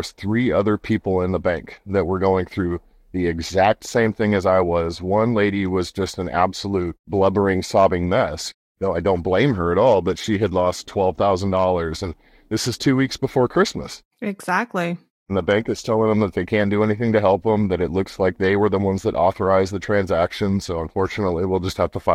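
A speech recording with no technical faults to report.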